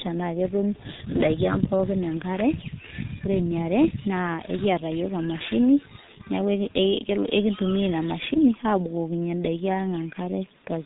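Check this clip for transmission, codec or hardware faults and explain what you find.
The speech carries one fault throughout, from G.723.1 codec compression. The codec describes the speech in coarse 30 ms frames, and its voice model updates slowly. Nothing passes above 3.8 kHz. The damage is heavy, which fits a rate near 6.3 kbit/s. The speech sounds muffled and hoarse, with blurred consonants.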